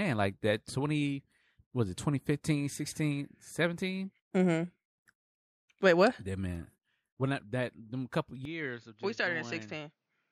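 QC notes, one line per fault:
8.45 to 10.32 s, input switched to a poorer device. At 8.45 s the speech turns duller and narrower, with nothing above 7.1 kHz from there to the end. The level falls by roughly 10 dB, and a faint new noise floor appears well below the speech. There is no gap at the change. This is likely a switch to a lower-grade microphone or input path with its own bandwidth, gain and noise.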